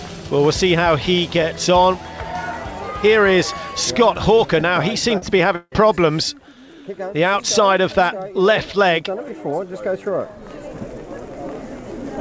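At 4.36 to 4.40 s and again at 5.18 to 5.23 s there is a brief smear, a short wobble where the sound seems to stretch for an instant before blending back. These are short concealed packet losses. About 20 ms and then about 40 ms of audio failed to arrive, and the decoder covered each gap by extending the last sound it had before crossfading into the real signal that followed.

From 5.55 to 5.74 s the sound turns into a fading buzz or hiss that dies away, with about 40 ms of near-silence before the audio resumes further along, missing what came in between. This is most likely a long network dropout. Roughly 160 ms never arrived, and the receiver filled it by continuing the last sound and letting it decay. The call path itself, which fits a G.722 codec, leaves nothing above 8 kHz.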